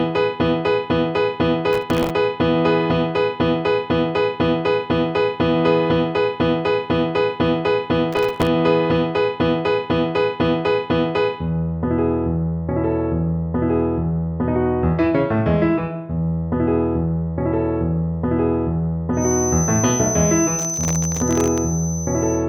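The processor misses dozens of sub-millisecond buffer deadlines in a row, replaying stale fragments with hard edges. This is processor overload crackle, a gritty tearing from 1.73 to 2.10 s and from 8.13 to 8.47 s. From 19.12 s to the end, a loudspeaker-to-microphone loop likely sits at the edge of feedback, and a feedback whistle near 6.1 kHz wavers about 10 dB below the sound. The same overload crackle returns, longer, from 20.59 to 21.58 s.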